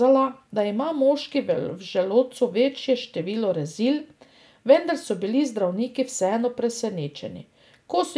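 No technical faults can be heard in this speech recording, as the signal carries through its full run without any audible disruption.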